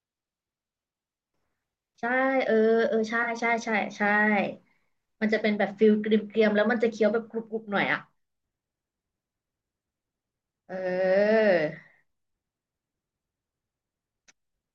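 At 3.22 to 3.29 s the speech is hit by a brief fault. This is a corrupt frame concealed by the decoder. Damaged bits in the coded stream were caught, and the decoder covered the gap itself. About 70 ms is lost, which fits a few frames.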